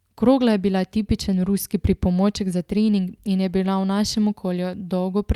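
A speech recording with nothing technically wrong with it.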